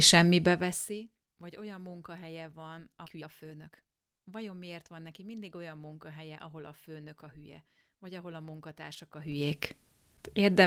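Skip ahead at 3.05 s: about a second of speech was dropped while later audio waited, so playback jumps forward with no gap, joining both sides almost directly.

Jitter buffer speed-up from 3.10 to 5.21 s: the receiver trimmed short pitch-period pieces repeatedly to shed about half a second of excess delay, so speech runs at 125% speed at unchanged pitch and sounds hurried.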